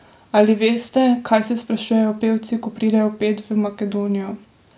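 Listening through this speech recording, nothing stood out as a technical problem at any point.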